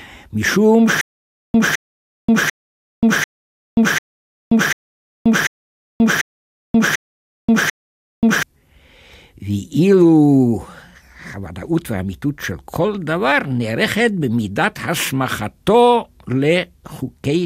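Stutter with silent gaps runs from 1.01 s to 8.43 s of this speech. A short fragment of about 211 ms plays, then about 532 ms of dead digital silence follows, and the cycle repeats ten times at a steady 743 ms period. It sounds like a mechanical hiccup, the same snippet returning again and again. The likely cause is a stalled player or stream replaying its last buffered fragment on each retry, so the audio due in that stretch never arrives.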